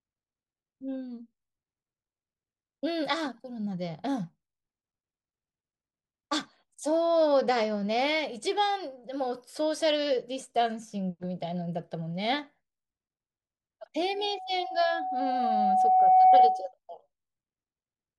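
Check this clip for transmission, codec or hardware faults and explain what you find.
One hardware fault is present. Loudspeaker feedback squeal runs from 14.06 to 16.72 s. The microphone re-amplifies its own loudspeaker. A 748 Hz tone swells over roughly two seconds, ending well above the speech.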